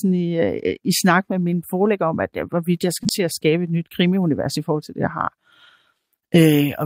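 Between "at jeg hvorvidt jeg" and "til at skabe et", from 3.03 to 3.07 s, there is a short concealed packet loss. About 20 ms of speech arrived too late, and the receiver spent roughly 15 ms extending the preceding sound before blending back. It is heard as a brief smear.

From 3.05 to 3.07 s the audio is a lost packet rebuilt from error correction. A 20 ms stretch, which fits a single packet, was played from the low-bitrate backup copy carried in the next packet. It sounds rougher and grainier rather than silent, and on a spectrogram that slice has blurrier harmonics and more noise between them.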